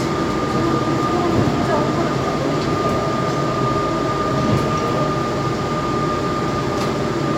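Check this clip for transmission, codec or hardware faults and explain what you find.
Nothing wrong can be heard anywhere in this audio.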